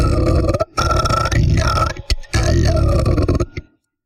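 No technical faults can be heard anywhere in this recording of sounds. Nothing in it needs to be flagged or repaired.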